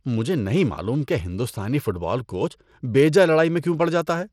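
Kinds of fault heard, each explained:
Bluetooth SBC compression: The speech is likely passed through the SBC Bluetooth codec. Its coarse sub-band quantisation adds plainly audible grit and flickering treble, with nothing above 17.4 kHz. The damage fits a small bit pool, giving a bitrate of around 96 kbps.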